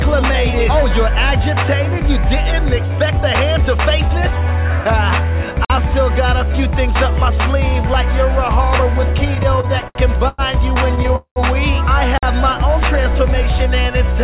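At 5.65 s, the audio was delivered in chunks with silence left between them, so a 50 ms hole cuts into the sound. This is a gap between chunks.

From 9.35 to 10.41 s, packets repeatedly arrived late and the jitter buffer kept running empty. The receiver stretched the last sound across eight short gaps, totalling 255 ms and the longest 104 ms. Nothing is lost, but the passage drags and stutters: repeated stalls.

At 11.16 to 11.39 s, the sound holds and buzzes on, then fades to roughly 110 ms of silence, about 200 ms filled in all, before resuming where it stopped. This is a call audio freeze, likely from packets held up in transit.

At 12.18 s, a second 50 ms hole appears, another gap between chunks. The spacing fits chunks of about 6 s.

Throughout, the band stops at 4 kHz, which fits a G.711 mu-law call path.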